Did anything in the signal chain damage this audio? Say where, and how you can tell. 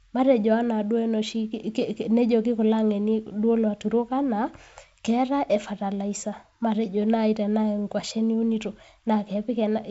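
No, nothing in the signal chain stood out as damaging this speech on listening, with the wideband telephone coding path sounding as that path normally does.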